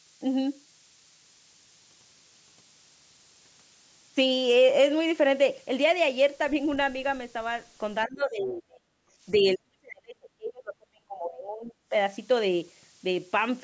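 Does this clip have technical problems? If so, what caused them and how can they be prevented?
Yes. A switching supply whistle runs throughout: a high tone wandering between 9.0 and 12.2 kHz, mostly near 10 kHz, about 15 dB below the speech, from a power supply switching audibly. Powering the recording chain from a clean linear supply or a battery prevents it.

Speech suppressed in double talk occurs from 8.06 to 8.91 s and from 9.39 to 11.94 s. The speech drops by roughly 35 to 40 dB, likely because the echo canceller confused near-end talk with the loudspeaker echo and ducked both. Using a headset, or an echo canceller with better double-talk detection, prevents it.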